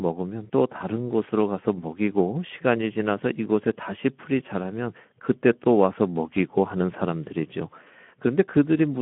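From start to end, the speech carries Speex codec damage: a hoarse, noisy texture, consistent with roughly 11 kbps CELP coding starving the excitation. Sound is confined to a telephone-like 150 Hz to 3.4 kHz band, and a spectrogram shows nothing above 3.8 kHz.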